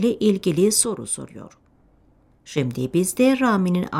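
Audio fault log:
0.85–2.58 s, sudden gain jump: the level drops by about 7 dB in a single step at 0.85 s and returns just as abruptly at 2.58 s. The likely cause is a digital gain change applied without any ramp, so the sound and its background noise fall and rise together. On the waveform the envelope shows a clean rectangular step down and back up; on a spectrogram the whole band dims uniformly between those two vertical edges.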